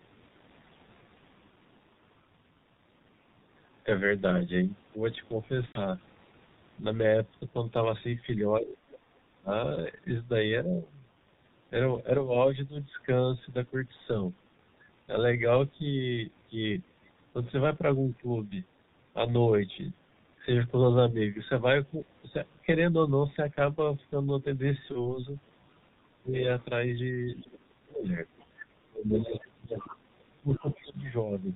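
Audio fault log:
throughout: G.723.1 codec. The band stops at 4 kHz, so the sound is muffled. Consonants smear and the tone turns hoarse. The damage is heavy and fits a rate near 6.3 kbit/s. Each 30 ms frame carries only a coarse model of the voice. That model updates slowly, so fast changes in the speech blur together rather than land crisply.
5.66–5.82 s and 24.92–25.22 s: VoIP packet loss concealed by the speech codec. About 90 ms of audio is missing in the first gap, which fits three lost 30 ms frames. The second gap is about 30 ms. The decoder repeats its last pitch and filter while lowering the gain. Because each frame builds on the one before, the voice stays weak for a while after.
8.58–9.51 s, 26.03–26.34 s and 27.44–30.97 s: speech suppressed in double talk. The talker's level drops by up to about 30 dB. Roughly 0.7 s, 0.3 s and 2 s are affected. The likely cause is an echo canceller that could not separate the talker from the other side's voice on its loudspeaker. 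It turned both down together.
8.69–8.91 s and 26.34–31.12 s: other side's voice leaking through. A second voice is faintly audible beneath the talker. It sits about 15 dB down in the first stretch and about 20 dB down in the long one near the end. It likely comes from the loudspeaker feeding back into the microphone. The echo canceller left part of it behind.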